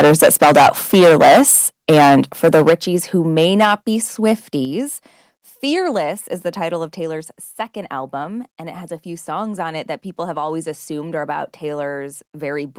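Speech opens with its peaks flattened, most likely because the microphone input gain was set so high that the loudest moments hit the converter's ceiling. This is microphone overload: the tops of the waveform are sliced off, putting a harsh, crackling edge on the loudest syllables. It is worst from 0.0 to 1.6 s, about 15 dB over the limit with roughly a fifth of the samples clipped. It eases from 1.89 to 2.74 s, about 11 dB over with roughly a tenth clipped, and is milder from 3.37 to 3.74 s, about 6 dB over with only a few percent clipped. Alongside this, the input gain is likely being pulled back by the call software's automatic control, which reacts to the distortion. Each step in the microphone volume drops the voice and the background together in a single sudden move: about 8 dB at 2.7 s, right at the end of the second distorted stretch, about 3 dB at 3.65 s, inside the third, and about 5 dB more at 4.65 s.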